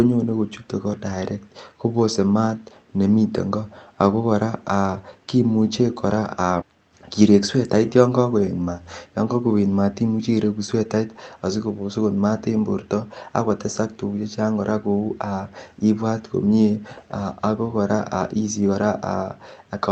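At 6.61 s the speech jumps abruptly forward with no gap, losing about 0.7 s: a skip ahead, where the jitter buffer discarded queued audio to catch up. From 6.71 to 8.19 s the speech sounds hurried at unchanged pitch, running about 11% fast. This is a jitter buffer speed-up, trimming short pitch-period pieces, roughly 0.2 s in total, to shrink the backlog.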